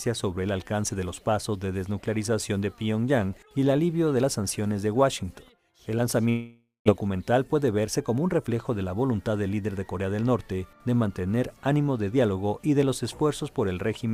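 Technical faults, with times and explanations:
throughout, sample clock jitter: The converter's clock wanders by a couple of microseconds, so each sample is captured at a slightly wrong instant. The resulting error depends on how steeply the waveform is moving, so it tracks the material itself. It comes through as a fine grainy hiss sitting roughly 35 dB below the signal, thickening on loud, bright passages and dropping away whenever the audio goes quiet.
6.29–6.90 s, long network dropout: The receiver likely stopped getting packets for a stretch, leaving about 400 ms of the original audio that never arrives. To cover the gap it extends the last sound it had into a buzzy, fading continuation, and this concealment trails off into about 190 ms of near silence. When the audio resumes, it picks up further along, with that missing portion simply absent and the delay shifted by something like 150 ms.
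6.97–8.48 s, jitter buffer speed-up: After the gap, the receiver finds its buffer holding more audio than its target and works the excess down by repeatedly cutting out short slices, each one or a few pitch periods long, around 150 ms in total. Playback runs at about 111% speed over this stretch while the pitch stays put, so the sound feels briefly hurried and compressed before settling back to its normal pace.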